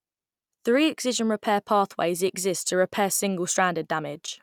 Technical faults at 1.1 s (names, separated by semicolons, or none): none